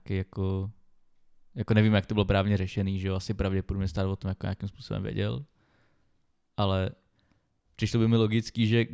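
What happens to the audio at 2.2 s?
Nothing goes wrong at 2.2 s: the speech runs on without any dropout, click, distortion or other fault at that point.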